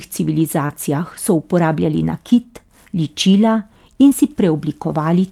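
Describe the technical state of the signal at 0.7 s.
Right at 0.7 s you're at the tail of a short concealed packet loss running from about 0.66 s. Roughly 30 ms of the call never arrived, so the decoder stretched the preceding sound to fill the gap, and you hear a quick smear before "so uporabljali".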